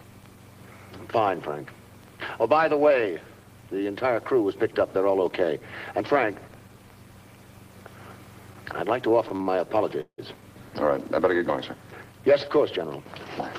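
Late packets left the jitter buffer empty three times in quick succession, producing a short stall from a late packet at 9.28–9.32 s, 9.36–9.51 s and 9.42–9.48 s. Each time the last sound was stretched by 20 to 42 ms, heard as a sound held too long with a slight buzz or dip before the audio resumes with nothing lost. Packets were likely held up in transit at 10.01–10.20 s, causing a call audio freeze. The receiver continued the last sound for about 170 ms as a fading buzz or hiss that decays to roughly 90 ms of silence, then the audio picks up where it stopped.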